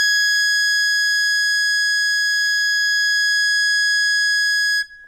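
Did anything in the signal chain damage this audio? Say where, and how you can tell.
Yes, at the codec stage, throughout the music. The damage is likely MP2 compression at a starved rate, fitting about 80 kbps. Too few bits switch off the top sub-bands, leaving nothing above 15.5 kHz, and coarse quantisation of what remains sounds dull, gurgling and granular.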